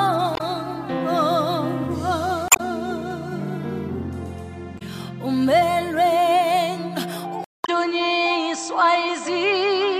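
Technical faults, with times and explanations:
0.33–0.41 s, 2.48–2.60 s, 4.75–4.82 s and 7.62–7.69 s, damaged data in a compressed stream: four short glitches, each under an eighth of a second. Bad bytes in the encoded stream mean the decoder can't make sense of those frames, so it spits out garbage briefly, loses its place and hunts for the next valid frame header. The last one lands inside the switched section below.
7.44 s to the end, input switched to a poorer device: there's a gap of about 200 ms, and then the sound comes back duller. Nothing gets through above 8.1 kHz, and a new noise floor sits roughly 40 dB under the signal. The overall level stays about the same. This is likely the recording moving over to a narrower-band input, such as another mic or a headset profile, which brings its own bandwidth limit and hiss.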